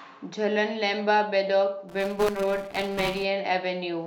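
A speech recording in which, from 1.89 s to 3.25 s, the voice takes on a steady robotic buzz at 200 Hz that lasts only while sound is present. This is buffer tearing. The program filling the playback ring buffer and the hardware draining it have slipped out of step, so they cross inside every period. A small slice of each period, roughly a sixth, is audio left over from about 10 ms earlier, with hard joins on either side. The 200 Hz repetition points to a buffer period of about 5 ms. In the middle of that stretch, at 2.28 s, a brief glitch cuts through. This is damaged data in a compressed stream: a short run of the encoded data was corrupted, so the decoder misread those frames, lost sync and hunted for the next valid frame header before carrying on.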